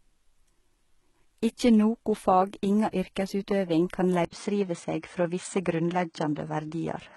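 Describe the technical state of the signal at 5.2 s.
At 5.2 s the signal falls inside an input switched to a poorer device, which runs from 4.25 s, right after "fag inga yrkesutøving kan", to the end of the clip at 7.16 s. The switch opens with an 80 ms silence. After it the band stops at about 9.1 kHz, so the speech sounds duller and narrower. A new noise floor sits roughly 50 dB below the speech, and the overall level stays about the same. This is likely a move to a different microphone or to a headset's call profile, which passes less treble and brings its own noise.

HE-AAC compression also affects this moment, and it runs through the whole clip. Only the lower spectrum is coded directly. The treble is rebuilt by copying lower bands upward and shaping them with a coarse envelope, so the harmonics no longer line up above the crossover. The codec damage is heavy, s sounds turn gritty or lispy, and nothing is present above 11.8 kHz. 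This likely comes from a low bitrate of around 16 kbps.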